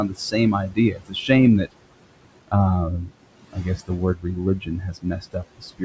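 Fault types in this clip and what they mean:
noise suppressor artifacts: The suppressor treats the steady room noise, which sits about 16 dB below the speech, as something to remove and pulls those bands down by about 21 dB frame by frame. The background drops away in pauses and swells back up under speech. The 8 kHz top cutoff of the G.722 call path stays fixed, whereas this pumping tracks the speech.
speech cut by the noise suppressor: Here the suppressor mistakes parts of the speech itself for noise and turns them down along with the background. This happens across 0.09 to 0.34 s, 0.69 to 1.3 s, 3.05 to 3.24 s, 3.43 to 3.9 s, 4.15 to 4.38 s and from 4.6 s to the end, with drops of about 12 to 22 dB. The affected speech sounds swallowed or faded rather than silenced outright, unlike a dropout, and the damage lands on the speech, not on the background.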